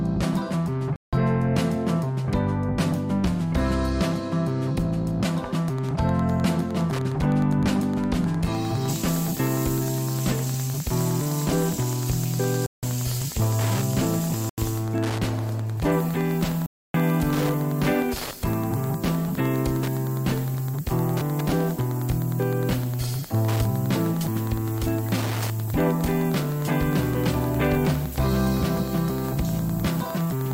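The audio drops abruptly to silence four times, at 0.96 s for 0.17 s, 12.66 s for 0.17 s, 14.49 s for 0.09 s and 16.66 s for 0.28 s. Each dropout is likely a Bluetooth stall, where interference delayed packets until the headphone buffer emptied. From 5.6 s to the end there is Wi-Fi interference: a steady tick every 102.4 ms, about ten per second, from a nearby radio's beacon being rectified in the audio circuit, sitting roughly 20 dB below the signal.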